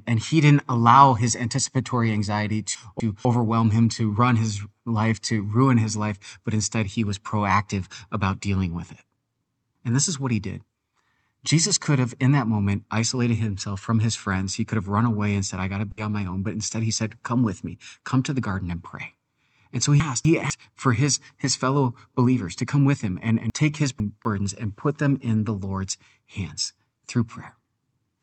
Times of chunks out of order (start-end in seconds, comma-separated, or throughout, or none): 2.75-3.25, 20.00-20.50, 23.50-24.25